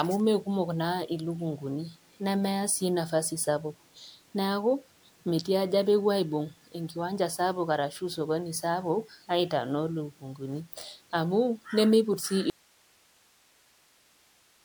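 Speech runs throughout with a swirly, smeared, hollow character. Consonant attacks blur. The damage is heavier than one encode should leave, which fits repeated MP3 coding at about 128 kbit/s. The likely cause is generation loss from around seven successive passes. At 12.50 s the speech cuts out abruptly and never returns before the end. Only hiss remains, about 35 dB below the speech level. This is an audio dropout to a faint residue. The signal was likely lost while the path after the break stayed live.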